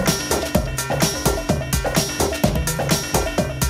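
Nothing goes wrong anywhere in this one; there's simply no technical fault to point to in the audio.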